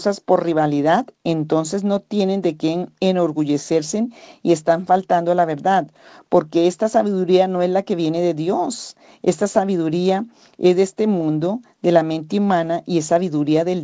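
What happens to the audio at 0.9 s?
Nothing goes wrong at 0.9 s; the speech there carries through intact, with the narrowed top end of a wideband call path that stops at 8 kHz.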